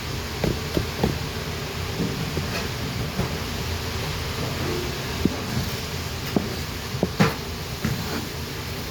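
Throughout the clip there is generation loss, most likely from the audio being decoded and re-encoded as MP3 around five times, each pass landing on a shifted frame grid and quantising the sound anew. The errors stack, so the sound turns swirly and hollow, with smeared transients and blurred attacks, more degraded than a single encode would leave it. The damage fits a 128 kbit/s MP3 chain, and nothing remains above 20 kHz.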